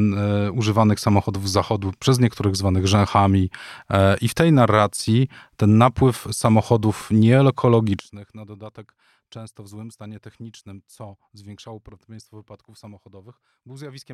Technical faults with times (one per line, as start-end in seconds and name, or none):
7.99-14.14 one channel inverted